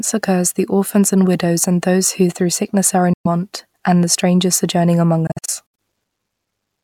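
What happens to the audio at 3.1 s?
Audio packets likely failed to reach the headphones in time and were discarded, a Bluetooth dropout from 3.13 to 3.27 s. Just after "who through sickness are", the sound cuts to silence, then returns at "and the strangers sojourning" as though it had kept playing.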